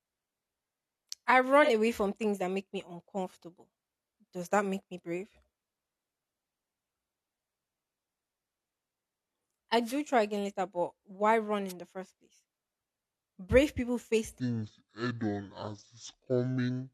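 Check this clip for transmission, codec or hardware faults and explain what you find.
Three kinds of fault turn up here: a codec dropout early on, two bursts of radio-mic noise in the middle, and a slowed-down stretch at the end.

AAC frame loss with concealment, 1.63 to 1.70 s: about 43 ms of audio went missing, which fits a single lost AAC frame. The decoder papered over the gap by reusing the last good spectrum with randomised phase, so instead of a hard gap you hear a short smeared, noisy and phasey blip in the speech. It's too brief for the concealment to fade toward silence.

Wireless microphone noise hit, at 9.80 to 9.99 s and again at 11.68 to 11.73 s: these sound like quick swishes of static laid over the speech. On an analogue FM radio mic, reflections of the transmitted signal can cancel each other at the receiver. The carrier dips and the receiver's own noise floor comes up into the audio. 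The first hit is roughly 0.2 s long and the second under 50 ms.

Section at the wrong speed, from 14.40 s to the end: the speech suddenly drops to 0.575 times normal speed. Pitch falls with it, by about ten semitones, so the speech turns deep and dragging. Speed and pitch shift together at that one point, which means this is likely a playback or edit stage running that section against the wrong clock, rather than any deliberate pitch effect.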